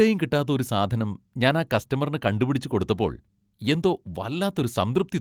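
No technical faults can be heard at any point in the recording.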